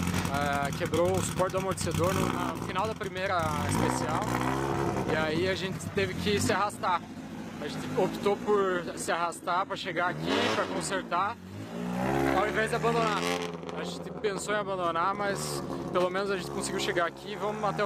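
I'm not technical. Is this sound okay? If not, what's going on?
No. An adaptive stream at a lower bitrate runs from 5.92 to 11.92 s. The connection slowed, so the player briefly switched to a cheaper, duller, artificial-sounding copy, without any gap.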